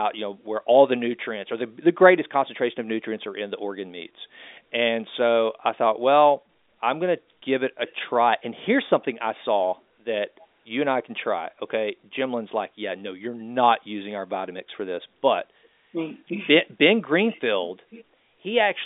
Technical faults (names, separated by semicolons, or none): none